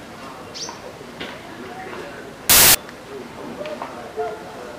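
From about 2.50 to 2.75 s, a quarter of a second of samples is built from the wrong bytes. The reader misassembles each sample, so the jittery low-order bits land in the loud part of the value. What you hear is a harsh burst of loud broadband noise.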